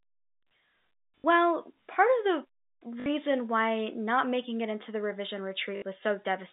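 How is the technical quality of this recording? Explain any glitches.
The speech comes through a telephone-band G.711 line, and three short glitches interrupt it. Packet loss with last packet repeated occurs at 1.18–1.24 s, at 3.00–3.06 s just before "why not making it", and at 5.76–5.82 s right after "it into the revision". Each 60 ms gap, which fits three lost 20 ms packets, was filled by replaying the last received packet. The repeats buzz at about 50 Hz, giving a brief robotic stutter.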